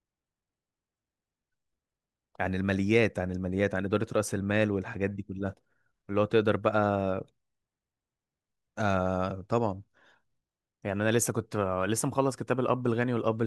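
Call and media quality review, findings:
Nothing to flag on this speech clip; no faults turned up anywhere in it.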